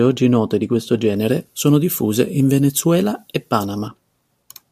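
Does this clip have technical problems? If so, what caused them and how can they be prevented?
Yes. From 1.16 to 3.88 s, after "oggi note di questo", pre-emphasis was left on. The treble sits about 13 dB high at 10 kHz, matching a 75 µs FM curve. The speech turns thin and sibilant. Prevent it by applying the matching de-emphasis on playback.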